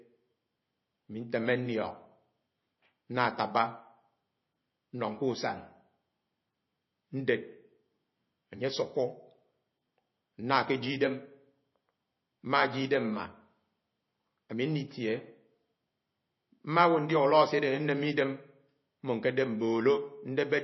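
From start to finish the speech sounds plainly watery and swirly, with nothing above 5.8 kHz. The likely cause is MP3 compression at a bitrate near 25 kbps. Short of bits, the encoder cuts the treble and lets weak frequency lines flicker between frames.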